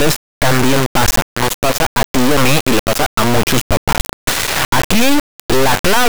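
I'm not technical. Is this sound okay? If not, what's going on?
No, it isn't okay. From start to finish the speech comes out as a harsh, extremely loud buzz, almost like a square wave, which cuts to silence in the quietest moments. That's an integer read as float fault: the sound was stored as whole numbers, but the player treats them as a different kind of number, which fits 32-bit integer samples being read as 32-bit float. The values come out as either nearly nothing or wildly too big, so the output slams between silence and maximum.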